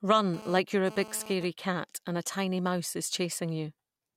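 GSM phone buzz runs from 0.34 to 1.45 s, ending just before "cat and a tiny". A nearby 2G phone transferring data pulses its transmitter about 217 times a second. The audio circuitry rectifies those bursts into a hard, raspy, harmonic-rich buzz about 16 dB below the speech.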